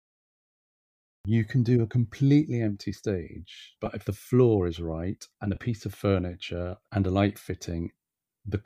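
The clip has a cut-off start. Digital silence runs from 0.0 to 1.25 s. Then the speech begins abruptly, mid-sound, just before "you can do", with no natural attack.

Lost LE Audio frames follow. At 3.86 s, after "completely empty stage", about 10 ms drops out. From 5.55 to 5.57 s, after "is right and a", about 20 ms goes. The decoder fills each gap by reusing the last spectrum with scrambled signs, so each one sounds like a brief noisy smear. The gaps fit one and then two 10 ms frames, which points to likely LC3 transmission.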